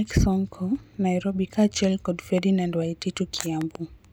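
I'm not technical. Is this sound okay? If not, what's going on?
No. There are two loud pops. The first runs from 2.38 to 2.40 s, just after "kaachiel kod". A double pop follows at 3.61 to 3.77 s and is noticeably louder. The speech continues underneath. The likely cause is a sudden electrical jolt, such as a plug, switch or static discharge.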